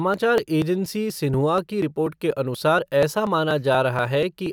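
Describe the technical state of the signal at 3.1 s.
At 3.1 s the speech is inside a run of periodic USB or driver dropouts lasting from 0.14 to 4.46 s. Every 0.24 s a background task stalls the audio path and roughly 10 ms is skipped, producing ticks. Their strict regularity, heard only over sound, separates them from random packet loss.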